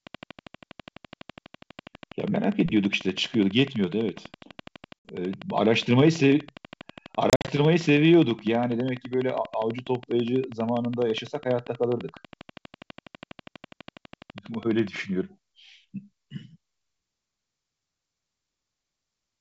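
Speech over a wideband G.722 telephone link, whose faint upper-band hiss fits the full 64 kbit/s mode, carries two faults. Most likely interference from nearby equipment or a faulty connection or power supply injects a train of clicks from 0.07 to 14.97 s: around two hundred near-identical pulses at a regular 12.2 per second, peaking around 5 dB above the speech. They are heard as steady ticking through words and pauses alike. Packet loss on the ADPCM call then blanks the audio twice. At 5.01 to 5.08 s, 60 ms drops out as a hard-edged hole. At 7.30 to 7.51 s, 120 ms goes missing in gaps scattered over 180 ms, the longest run 50 ms, which points to several short packets lost. Each time, the decoder's adaptive predictor and step size drift out of step with the sender's. The returning speech comes back slightly distorted before settling within a few tens of milliseconds.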